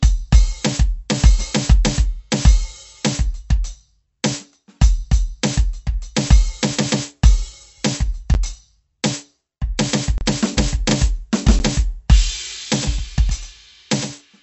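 Across the whole music clip the sound has a watery, swirling quality with smeared attacks, and nothing is present above 7.9 kHz. This is MP3 compression, and the damage is plainly audible. The likely cause is a low-bitrate encode, with the cutoff and artefacts pointing to around 48 kbps. At that rate the encoder drops weak frequency lines that flicker between frames and cuts the treble at a fixed frequency.

Three blocks of digital silence follow. At 8.34 s and at 11.59 s, 10 ms gaps are too short to register as silence and come across as brief ticks or dips. Between 10.18 and 10.21 s a 30 ms gap is heard as a short hole. In each case the audio is replaced by zeros, either because the output buffer was not filled in time or because a calculation produced invalid values. The sound drops out and returns without any fade.

From 12.76 s to the end, a doubled audio track appears. A second full-band copy of the music trails the original by roughly a tenth of a second at about 10 dB lower. 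It carries no decay or room colour and enters abruptly. The likely cause is the same signal being captured again through a slower path, or an edit leaving two copies out of alignment.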